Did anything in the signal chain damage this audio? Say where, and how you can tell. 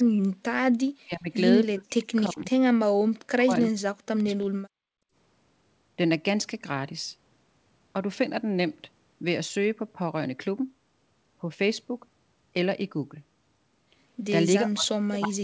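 Yes. Speech suppressed in double talk, at the call-processing stage: the speech collapses by about 40 dB from 0.0 to 0.4 s, 0.96 to 1.29 s, 1.71 to 2.54 s, 3.1 to 4.9 s and from 14.63 s to the end. These are time-limited drops, not the steady 8 kHz band ceiling of the wideband codec. The likely cause is an echo canceller that, with both ends talking, mistook the near talker for loudspeaker echo and pulled its gain down.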